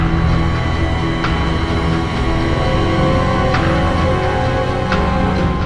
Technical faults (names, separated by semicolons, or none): none